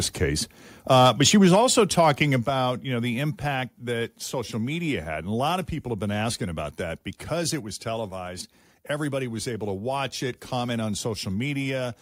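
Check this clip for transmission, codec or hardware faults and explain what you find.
Yes, two hardware-side faults appear in the speech, both in the first four seconds.

Microphone overload, 0.91 to 1.6 s and 1.99 to 2.1 s: peaks exceed full scale by about 4 dB, then about 1 dB, giving harsh crackle. The likely cause is an input set too hot. The waveform shows flat-topped peaks, and the spectrogram shows smeared high-frequency splatter.

Microphone volume stepped down at 1.47 s, 2.46 s and 3.48 s: the level drops abruptly by about 2, 6 and 2 dB, likely because software gain control reacted to the clipping. The waveform envelope shrinks in sudden steps.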